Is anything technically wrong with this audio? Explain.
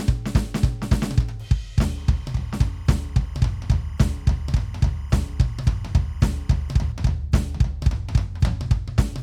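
Yes. Timecode bleed runs from 1.98 s to 6.92 s. Linear timecode from a nearby track or cable leaks into the music path. The code is a square wave that flips between two pitches, roughly 1 kHz and 2 kHz, as its bits change. Here it sits about 30 dB under the music. It comes through as a steady chirping warble behind the sound. Its even rhythm fits 25-frame-per-second code.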